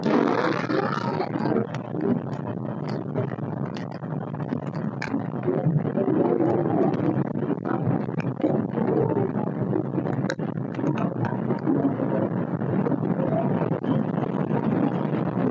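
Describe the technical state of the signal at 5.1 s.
At about 5.08 to 5.10 s there is a skip ahead: roughly 0.7 s of audio was discarded while later audio was already waiting, so playback jumps straight across with no silence or filler. That abrupt splice, rather than an audible gap, separates it from a dropout.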